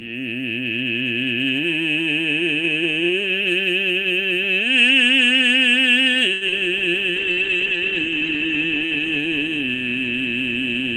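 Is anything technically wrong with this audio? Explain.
Yes, the music suffers three kinds of network-call damage, clustered between 6.3 and 9.7 s.

A short stall from a late packet at 6.33 to 6.43 s: the jitter buffer ran dry, so the receiver stretched the last sound for about 79 ms until the packet arrived, with nothing lost, leaving a held, slightly buzzy moment.

Short concealed packet loss at 6.47 to 6.50 s and 6.52 to 6.54 s: about 20 ms went missing each time, and the decoder extrapolated from preceding audio, causing brief smears.

A call bitrate drop from 7.11 to 9.66 s: the encoder was throttled, which fits a fall from 32 to 11 kbps, bottoming out for about 1.45 s, and the top end narrows from 20 kHz to 8 kHz, so the music turns muffled and watery.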